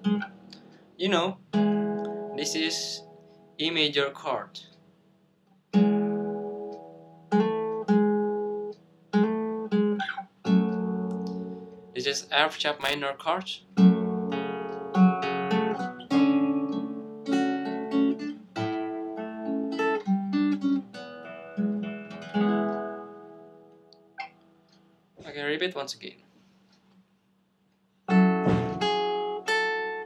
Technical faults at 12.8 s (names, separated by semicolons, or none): loose connector crackle